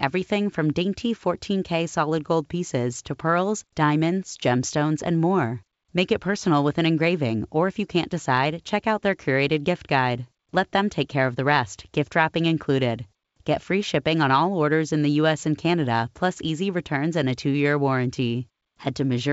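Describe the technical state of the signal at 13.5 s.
At 13.5 s the signal is intact, with the speech carried cleanly through G.722 wideband telephone coding at 64 kbit/s and no fault present at that moment.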